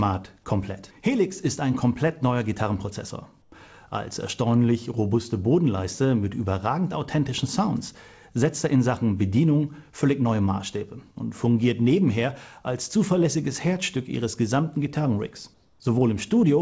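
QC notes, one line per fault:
3.42–3.52 s and 15.54–15.80 s: comfort noise in place of the background. For 100 ms, then 260 ms, the real background gives way to smoother synthetic noise, about 7 dB and about 2 dB quieter, likely because transmission paused and the receiver filled the gap.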